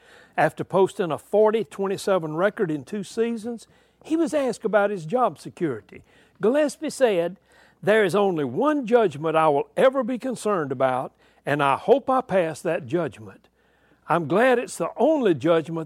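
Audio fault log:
0.91–1.62 s and 6.75–8.18 s, drift correction step: the speech suddenly runs about 6% fast and sits a full semitone sharp, first for roughly 0.7 s, then for about 1.4 s, before snapping back to normal pitch and pace each time. Speed and pitch move together, so this is likely clock-matching software changing the playback rate in one jump to rebalance its buffer, rather than a gradual correction.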